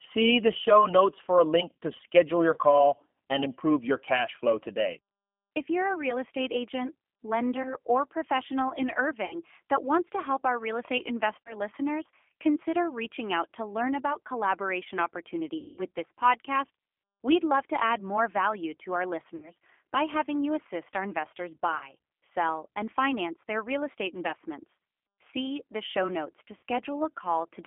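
Throughout, the speech passes through a G.729 codec (the G.729A variant at 8 kbit/s) on a line limited to about 200 Hz to 3.4 kHz. Each frame is rebuilt from a vocal-tract filter and a few pulses, so the voice sounds plainly rough, thin and synthetic.

VoIP packet loss concealed by the speech codec occurs at 2.54 to 2.59, 7.63 to 7.76, 9.25 to 9.36, 11.42 to 11.56, 15.58 to 15.81, 19.36 to 19.52, 21.77 to 21.91 and 26.57 to 26.64 s. The decoder fills each gap of 20 to 60 ms, or 200 ms at 15.6 s, by extending the last pitch and filter while fading them. This turns the voice into a stretched, fading buzzy tone or coloured noise that stays weak until it recovers.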